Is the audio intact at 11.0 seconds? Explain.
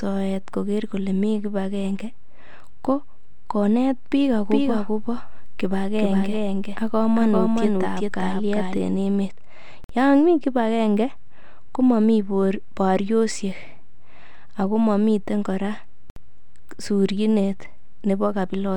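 Yes, at 11.0 seconds the speech plays through cleanly with no dropout, click, distortion or other fault audible at that moment.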